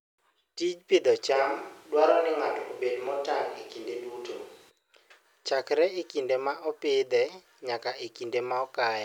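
From 1.37 s to 4.69 s the speech abruptly turns roomy and hollow, with thinner bass, then snaps back just as suddenly. This is most likely a switch to a distant microphone, with the close mic's feed dropped and a farther pickup covering that stretch. Loudness stays roughly the same, but the room noise sits only about 30 dB below the speech. A spectrogram shows weakened low frequencies, smeared reverberant tails and a raised noise floor between the hard edges.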